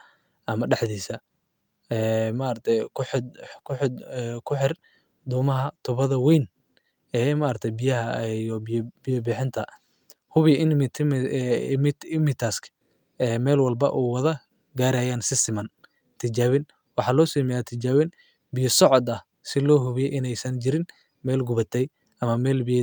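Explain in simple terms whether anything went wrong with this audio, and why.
Nothing went wrong; no problems can be heard here.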